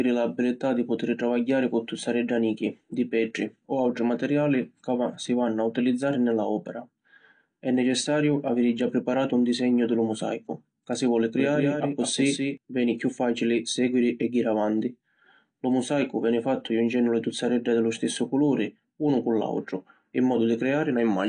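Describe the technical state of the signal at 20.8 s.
At 20.8 s the speech carries the same damage heard across the whole clip, most likely AAC compression. Nothing is present above 9.8 kHz, so sibilants sound dull, and the remaining band has a plainly audible warbling, smeared texture. The encoder splits the signal into frequency lines per frame and quantises them coarsely against a hearing model, dropping and thinning bands it judges least audible. The damage level fits a low bitrate around 32 kbps.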